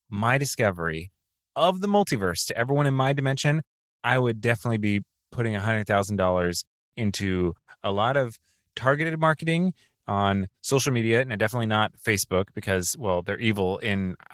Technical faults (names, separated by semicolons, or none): Opus voice compression